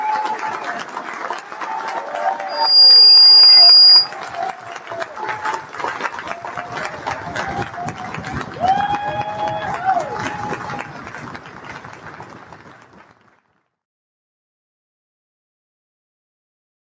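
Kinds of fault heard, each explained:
Noise suppressor applied to music or sounds: A speech-oriented noise suppressor stayed active on audio that is not speech, so it kept judging sustained and ambient parts of the sound as background noise and pulling them down. Throughout the clip the level swings by about 10 dB as the suppressor clamps and releases. Onsets come through, but held portions and decays sag, giving an unsteady, pumping, thinned-out character across the whole recording.
Sound cut by the noise suppressor: Between 11.83 and 13.4 s the suppressor classified this stretch as noise and attenuated it harder than the surrounding material. The steady and fading parts of the sound drop by up to about 4 dB for roughly one and a half seconds, so their sustain is trimmed and the tail falls away early. Sharper, sudden elements in the same span mostly escape the cut.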